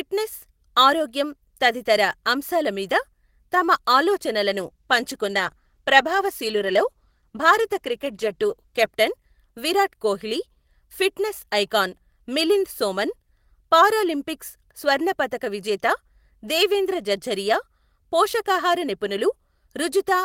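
From 4.53 s to about 8.99 s there's a call bitrate drop: the encoder got starved, sounding like a fall from roughly 32 kbps to around 14 kbps. For about 4.4 s the speech turns coarse and muffled, the top end shaved off, until the rate recovers.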